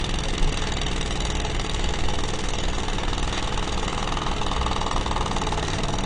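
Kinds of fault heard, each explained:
Low-bitrate audio saved at a high bitrate: the spectrogram shows a hard ceiling at 10 kHz throughout, likely left by an earlier low-bitrate encode before high-bitrate re-saving.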